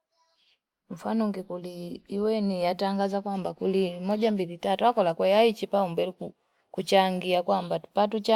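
No technical faults are audible.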